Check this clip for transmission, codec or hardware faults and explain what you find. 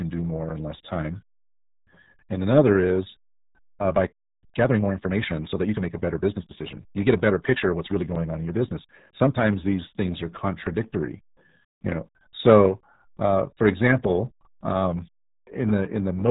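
The speech carries one fault, heard throughout: RealAudio 14.4 codec damage. It is heavy. Everything above about 3.8 kHz is gone, so consonants lose their edge and the sound is muffled. This early dial-up codec models speech with very few bits per frame. The result fits an 8 kbit/s rate. The coarse modelling turns the speech into a gargly, bubbling texture. The whole clip sounds thick and narrow.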